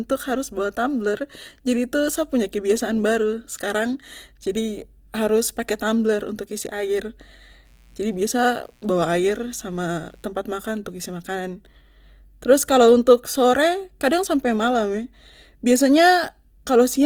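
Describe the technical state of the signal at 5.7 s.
At 5.7 s the speech carries Opus compression artefacts that run through the whole clip, likely from Opus in its CELT music mode at a low rate, which fits roughly 24 kbps. The encoder preserves each band's energy but fills starved bands with folded or noise content, so the speech sounds grainy and rough rather than swirly. On a spectrogram the bands look filled yet smeared and noisy, with few holes, and energy stops near 20.4 kHz.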